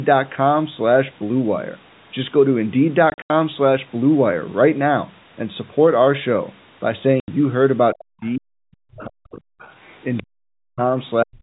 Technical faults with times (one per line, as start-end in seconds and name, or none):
3.10-3.30 packet loss filled with silence
7.20-7.28 packet loss filled with silence
7.94-9.63 speech suppressed in double talk
8.23-8.29 other side's voice leaking through
8.96-9.05 other side's voice leaking through
9.31-10.23 other side's voice leaking through
10.22-10.84 speech suppressed in double talk
11.24-11.39 speech suppressed in double talk